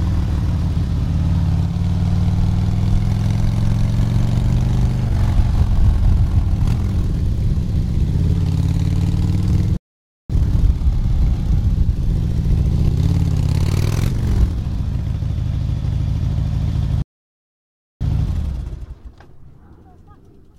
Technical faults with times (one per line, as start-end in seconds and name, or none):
9.77-10.30 playback stall
17.02-18.01 playback stall